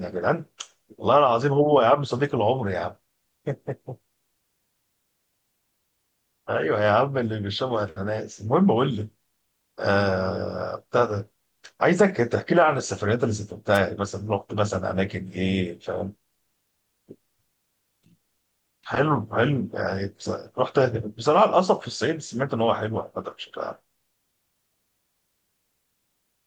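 At 13.73 to 13.79 s a wireless microphone noise hit interrupts the speech: the FM radio link briefly faded, letting receiver noise surge through as a 50 ms swish of static. A spectrogram shows a broadband vertical smear; the waveform shows a dense noisy burst.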